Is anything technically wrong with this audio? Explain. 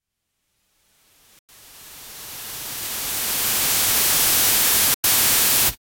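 Yes. At 1.39 to 1.49 s and again at 4.94 to 5.04 s, the sound fades out over about 3 ms into a hole roughly 96 ms long before resuming, a digital broadcast dropout. The receiver muted while frames failed, which fits about three lost frames each time, and that audio is gone.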